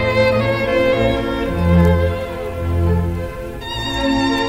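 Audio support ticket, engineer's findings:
Hard clipping, 1.72–1.92 s: peaks flattened, crackle on the loud passage. Signal overdrives a gain stage or converter by about 3 dB; flat tops generate high-order harmonics heard as brief crackle. Check input gain staging ahead of the ADC.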